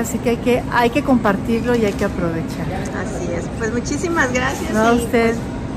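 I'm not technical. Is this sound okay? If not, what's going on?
No, there's hard clipping from 0.28 to 1.31 s and again from 4.78 to 5.25 s: the audio got too loud, peaks were chopped flat, giving crackle on the peaks.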